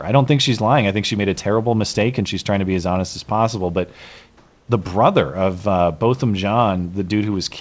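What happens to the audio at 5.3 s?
Nothing goes wrong at 5.3 s; the audio there is intact, with no dropout, glitch or distortion to be heard.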